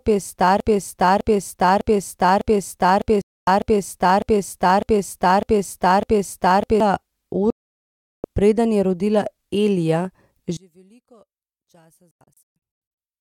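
It's a speech clip, and it's in trouble right from the start. A broken-record loop is already running when the audio begins: the same 0.6 s fragment repeats back to back, about ten times, until 6.80 s. That most likely means the player or stream stalled and kept re-sending the last chunk it had, so whatever should have played in those first seven seconds is gone. On top of that loop there's a digital broadcast dropout at 3.22 to 3.48 s, a mute of about a quarter second. A longer one follows at 7.50 to 8.25 s, roughly 0.74 s of silence ending just before "preden je rodila". The lost time in each case fits whole 32 ms frames failing and being muted until clean ones arrived. From 10.57 s to the end, the level suddenly falls by about 32 dB and the centred speech nearly disappears, leaving a faint residue. That points to one channel inverted, likely a polarity flip on one side, so the common centre content cancels once the two channels get summed to mono. 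Inside that stretch there's a third dropout, from 12.11 to 12.56 s, and this one isn't a single hole. It's a cluster of short gaps spread over about 0.9 s, the longest around 0.13 s, with roughly half a second lost in total.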